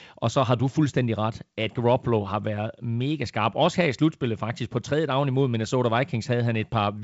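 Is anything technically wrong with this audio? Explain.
No, nothing technically wrong: this is speech carried over G.722 wideband telephone coding, with the expected light upper-band hiss and nothing above about 7.7 kHz.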